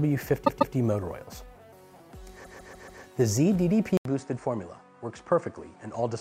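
At 0.45 s a 144 ms block of repeated frames plays three times in a row, to 0.73 s. At 2.44 s the same fault recurs, the block playing five times, to 3.01 s. Each repeat stutters audibly and stretches the audio.

At 3.97 s the sound drops out for 80 ms. It returns duller and about 5 dB quieter, with nothing above 9.6 kHz and a faint new noise floor far beneath it. The input likely switched to a poorer device.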